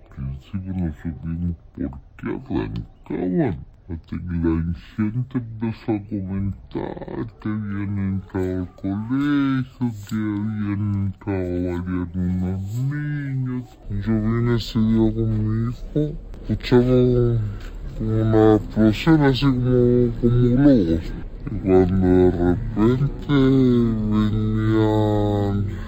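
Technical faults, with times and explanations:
Throughout: stereo read as mono. Everything plays at half speed (0.5x) and an octave low (-12 semitones), with a fainter mirrored copy in the upper spectrum. The interleaved left and right samples are being read consecutively as one channel, doubling every event's duration.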